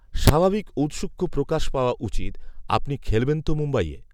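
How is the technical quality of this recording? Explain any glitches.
One fault stands out in this speech recording: integer overflow at 0.28 s. Pushed about 3 dB past the integer limit, the peak wrapped to the opposite sign rather than being held, producing a violent crack far sharper than clipping.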